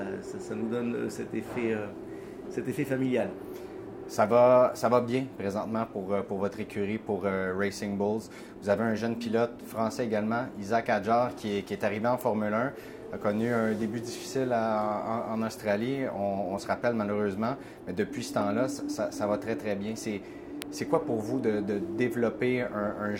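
Electrical switching spikes occur at 12.21 s and again at 20.62 s. Each is a sharp snap lasting only one to three milliseconds, peaking at around -15 dBFS and sitting on top of the sound. The likely cause is a nearby switch, motor or static discharge throwing off a brief arc that the audio line picked up as interference. The two snaps peak at the same level.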